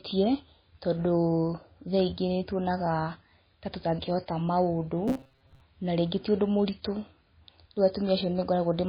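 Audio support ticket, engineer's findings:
Whole clip, speech: heavy MP3 compression, likely a starved encoder. Watery and swirly texture, metallic chirps on s sounds, smeared attacks. Weak frequency lines flicker frame to frame, which fits a very low bitrate around 19 kbps.

5.08 to 5.61 s: robotic sound from repeated short buffers, a rigid metallic buzz pinned near 134 Hz. Audio arrives late, so playback likely loops the last chunk of about 7.5 ms. Roughly half that stretch is repeats, with real audio skipped.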